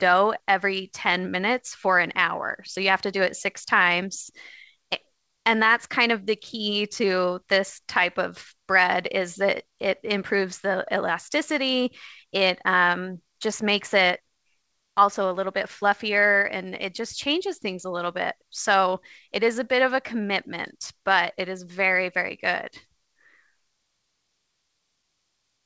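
No technical faults can be heard in this speech.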